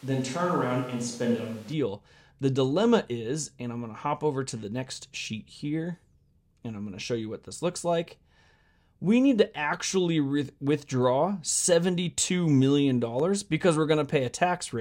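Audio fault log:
0.00–1.72 s, switch to a distant microphone: the clip opens already in this state, with the speech sounding roomy and hollow and thin at the bottom end. The likely cause is that the close mic's feed dropped out and a microphone further away took over. Distance lets the room's reflections dominate and loses the bass a close mic picks up. The level stays about the same, but room noise sits only around 25 dB under the speech. At 1.72 s it snaps back to the close sound.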